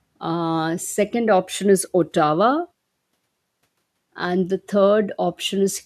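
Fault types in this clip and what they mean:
The speech signal shows no technical faults, and the background falling silent in the pauses before the next sound is the expected behaviour of noise gating rather than a defect.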